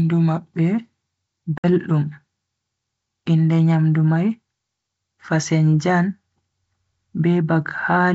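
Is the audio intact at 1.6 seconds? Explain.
No. Packet loss on an ADPCM call cuts about 60 ms of speech to silence from 1.58 to 1.65 s, roughly three packets, leaving a hard-edged gap. The decoder's predictor and step size then lag the sender's, so speech resumes slightly distorted.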